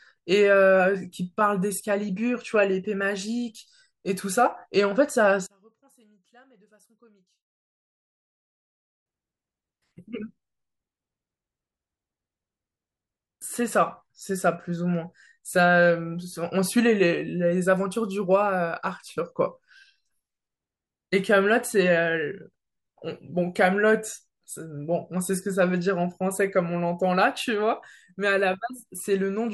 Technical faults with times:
5.46-9.06 one channel inverted

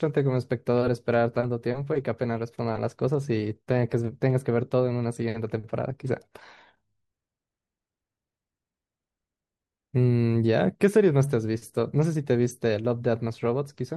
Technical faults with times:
none

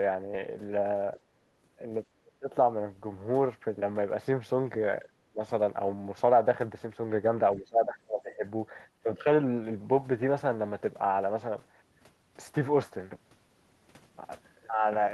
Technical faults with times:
2.21-2.50 speech suppressed in double talk
5.01-5.40 speech suppressed in double talk
7.56-8.44 speech suppressed in double talk

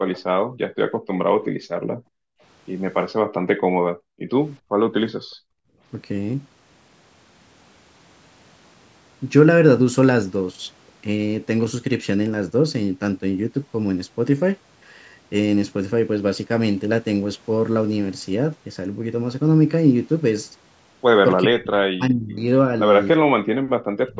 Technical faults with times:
0.13-0.20 echo leak
0.45-0.60 background gated by the echo canceller
1.49-2.41 background gated by the echo canceller
3.20-4.79 background gated by the echo canceller
5.15-5.81 background gated by the echo canceller
21.44-22.46 speech suppressed in double talk
23.21-24.19 speech suppressed in double talk

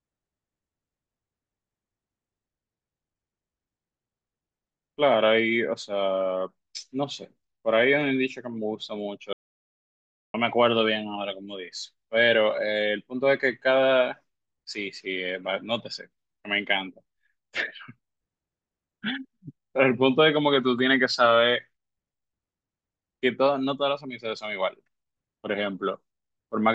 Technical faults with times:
9.33-10.34 audio dropout to silence

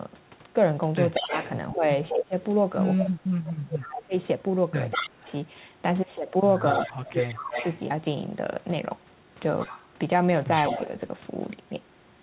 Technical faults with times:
1.14-2.15 echo leak
1.19-5.28 speech suppressed in double talk
3.47-5.32 echo leak
6.68-7.79 echo leak
6.83-7.59 speech suppressed in double talk
9.60-11.00 echo leak
10.75-10.80 speech suppressed in double talk

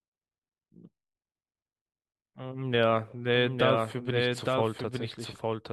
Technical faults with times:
3.35-5.72 doubled audio track

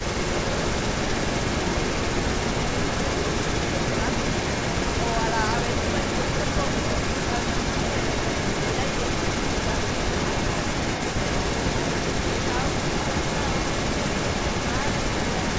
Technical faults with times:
0.00-15.59 echo leak

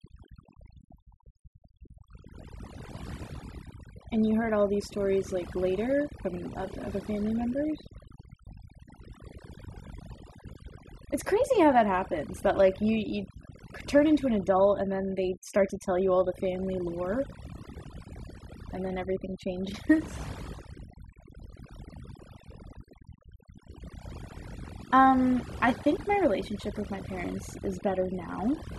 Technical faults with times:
0.00-28.78 overdone noise removal

